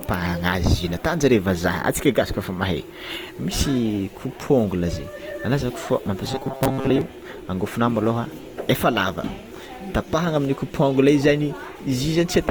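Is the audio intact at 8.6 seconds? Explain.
No. Opus compression affects the whole clip, including 8.6 s, and its damage is plainly audible there. The likely cause is the encoder's music (CELT) mode, which fits a rate around 24 kbps. It preserves each band's energy but, short of bits, fills bands by folding lower ones or with noise, so the speech sounds noisy, rough and grainy rather than swirly. Bandwidth stays full, with content reaching about 20.2 kHz.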